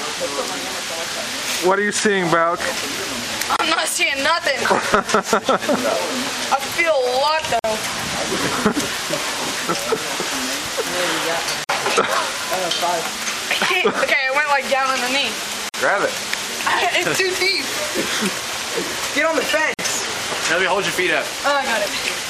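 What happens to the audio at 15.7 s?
From 15.69 to 15.74 s a gap at a join of encoded pieces opens: a gap of about 49 ms, left by encoder delay and last-frame padding, with smeared edges. Unlike a dropout, nothing is lost; the sound resumes where it stopped, at a regular 4.0 s spacing.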